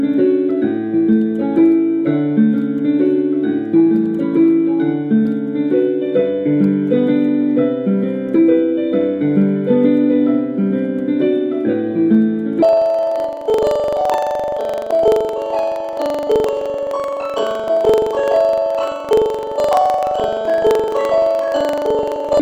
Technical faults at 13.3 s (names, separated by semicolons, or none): planar audio read as interleaved